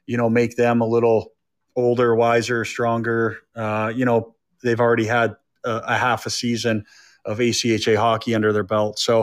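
No technical faults are audible.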